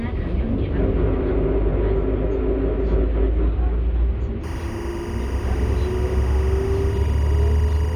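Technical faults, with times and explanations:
4.44 s to the end, timecode bleed: a chirping, buzzy warble sits around 20 dB below the sound. Linear timecode from a neighbouring track or cable has leaked in. Its square-wave code flips between two tones near 1 kHz and 2 kHz, and its rhythm fits 24 frames per second. On a spectrogram this shows as steady horizontal bands at those frequencies plus their odd harmonics, and on the waveform as a fine, constant square-edged fuzz.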